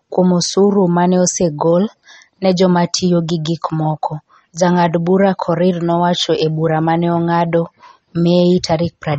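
Speech, carrying MP3 compression damage throughout: the treble stops abruptly at about 8.3 kHz, and the remaining sound has a watery, swirly texture as weak frequency components drop in and out between frames, likely from a heavily starved encoder, which fits a low bitrate around 32 kbps.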